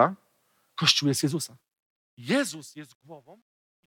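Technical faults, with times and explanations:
1.60 to 3.91 s, truncation distortion on a fade: as the fade-out falls, an undithered stage, consistent with 12-bit truncation, squares the quiet waveform into coarse steps. From 2.98 s it turns gritty. Unlike gating, the grit worsens steadily as level drops.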